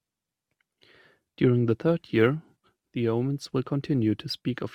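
Sample clock jitter runs from 1.68 s to the end of this speech clip: the converter's clock wanders by roughly 2 microseconds, so samples land early or late, adding a hiss about 40 dB below the signal that swells on loud, bright passages and vanishes in silence.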